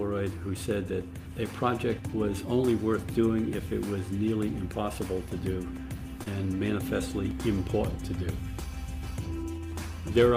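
At 6.23 to 6.28 s there is a short concealed packet loss: about 20 ms of audio never arrived, and the receiver extrapolated the preceding sound to fill the gap before blending back. Unlike a plain dropout, there is a brief smear or wobble rather than silence.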